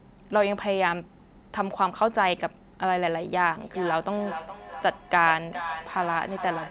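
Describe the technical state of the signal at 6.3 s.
At 6.3 s the signal is inside a stretch of feedback echo between two devices that runs from 3.63 s to the end at 6.7 s. A second device in the room replays the call, its microphone sends that back, and neither echo canceller removes the other device's playback. Each sound returns at a steady interval of roughly 0.4 s, each repeat thinner and more ringing, the loudest about 10 dB below the speech. That regular, repeating pattern separates it from room reverberation, which decays smoothly without distinct returns. Everything here stays within the call's 4 kHz bandwidth.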